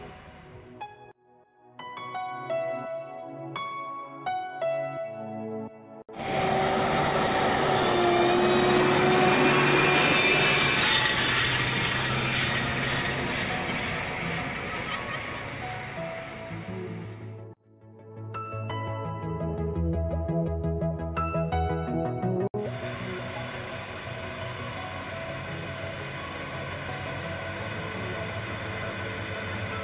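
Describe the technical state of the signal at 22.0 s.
At 22.0 s the signal is intact, with no dropout, clipping, distortion or other fault audible at that moment.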